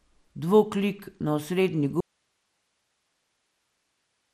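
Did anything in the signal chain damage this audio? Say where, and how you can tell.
Yes. Throughout, the speech sounds dull and gurgling, with a granular roughness and nothing above 15.2 kHz. That points to the codec stage, likely MP2 compression at a low rate around 80 kbps, where upper sub-bands are switched off and those left are coarsely quantised.

At 2.01 s the speech cuts off abruptly, and until the end only hiss remains, roughly 50 dB below the speech level. This is an audio dropout to a faint residue, likely a lost source upstream while the path after the break stayed live and kept passing its own noise.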